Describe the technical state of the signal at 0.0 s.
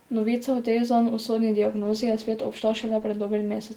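At 0.0 s the speech signal is intact, with no audible fault at that moment.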